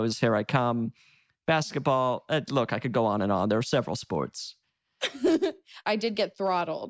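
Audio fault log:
No faults heard.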